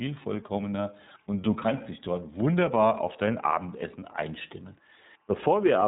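From start to finish, a faint, steady chirping warble sits behind the speech, flipping between two pitches near 1 kHz and 2 kHz at about 45 dB below the voice. This is timecode bleed: linear timecode running at 24 frames per second has leaked in from a neighbouring track or cable. Its square-wave code switches between those two tones as the bits change, giving the restless twittering texture.

Throughout the clip, the speech also sounds narrow, slightly gritty and synthetic, with nothing above about 3.8 kHz, so sibilants and consonant edges lose their air. This is iLBC codec damage, plainly audible here. The codec rebuilds each frame's excitation independently, and the roughness fits its 13.33 kbps mode with 30 ms frames. The missing top end comes from its narrowband design.

Also running throughout is a very low hiss, roughly 55 dB down, that thickens on louder passages and on sharper, brighter sounds, then drops away when the voice pauses. 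This is sample clock jitter: the converter's clock wanders by a fraction of a microsecond, so samples land slightly early or late. The resulting error scales with how steeply the waveform is changing, which is why it follows the speech rather than sitting at a fixed level.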